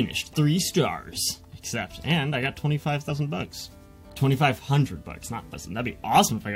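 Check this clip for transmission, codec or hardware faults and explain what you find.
There's one codec problem here: damaged data in a compressed stream, heard as two brief blips at 3.09 s and 5.53 s. Corrupted bytes knock the decoder off sync until it finds the next valid frame.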